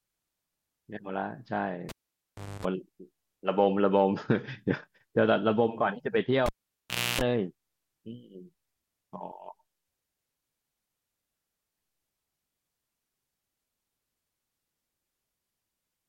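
Speech with the cable pulled and plugged in twice, at 1.89 to 2.65 s and 6.46 to 7.21 s. Each time a pop drops the signal to near silence for about 0.7 s. Mains buzz follows while only the tip touches, 50 Hz for 0.26 s and then 60 Hz for 0.29 s, before a second pop restores the sound.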